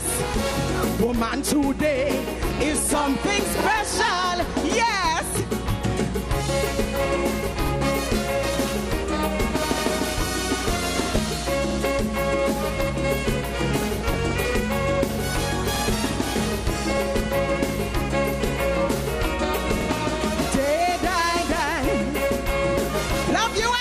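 MP2 compression runs throughout: the sound is dull, with a gurgling, granular edge, as though upper sub-bands were being dropped and the remaining ones coarsely quantised. The cause is likely a low-rate MPEG Layer II stream, which fits about 80 kbps.

DAB burbling appears at 2.50–3.03 s, 7.04–7.47 s, 10.96–11.29 s, 14.01–14.52 s, 16.69–17.36 s and 23.22–23.57 s. Bit errors, at a fraction of a percent, slip past error correction and corrupt samples and scale factors, so individual sub-bands carry short blips of noise and jump in level.

Overlapping chunks cause brief stutters at 3.61–3.66 s, 7.66–7.71 s, 11.71–11.76 s, 15.76–15.81 s and 19.81–19.86 s. Each 4-second chunk begins before the previous one ends, so 50 ms of audio plays twice at every join.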